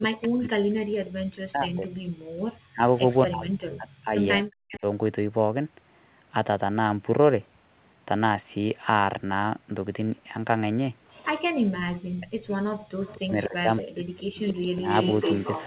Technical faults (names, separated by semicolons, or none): speech suppressed in double talk; background gated by the echo canceller; echo leak